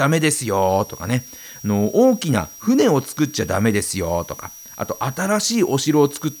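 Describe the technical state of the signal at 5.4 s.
Switching supply whistle at 5.4 s, present throughout the speech: a switching power supply running in audible burst mode or beating with another supply leaves a high tone drifting between 5.69 and 5.80 kHz, roughly 20 dB below the speech.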